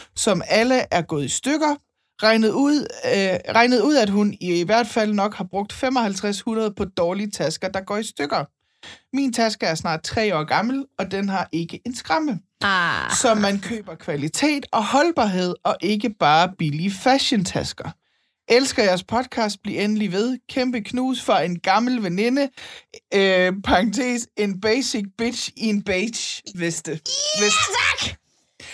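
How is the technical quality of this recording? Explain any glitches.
No technical faults are audible.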